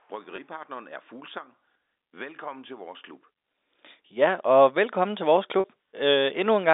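At 0.36 to 0.38 s, and at 5.60 to 5.64 s after "og velkommen til vores", packet loss with pitch repetition occurs. Lost audio is bridged by repeating the last pitch period, giving a brief buzzy hold.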